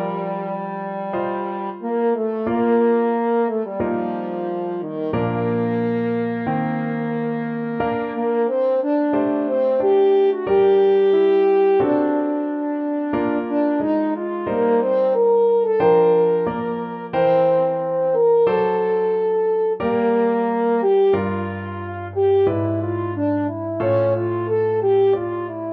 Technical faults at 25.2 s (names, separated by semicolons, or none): none